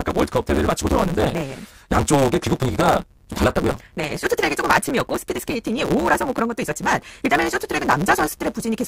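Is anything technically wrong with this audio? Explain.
Yes. A block size mismatch, truncated, runs through the whole speech clip. One stage writes longer blocks than the next stage reads, so the tail of every block is dropped. The written blocks sound like about 512 samples each. Each cut leaves a seam, and the seams repeat at about 138 Hz, giving a steady buzz under the speech. Losing those block ends also makes the speech run about 1.6 times faster than normal, while its timbre stays the same.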